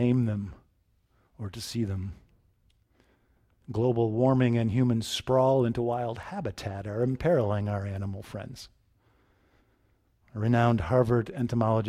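No dropouts, clipping, glitches or other technical faults can be heard anywhere in the speech.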